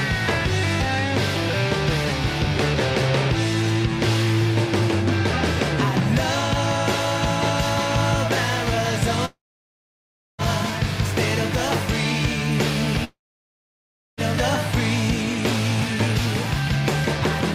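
At 9.25 to 10.41 s and again at 13.04 to 14.20 s, the sound trails off into a brief fading buzz, then about 1.03 s of silence, resuming without the lost stretch, likely a long network dropout. Waveforms show flat near-zero gaps; spectrograms show blank columns.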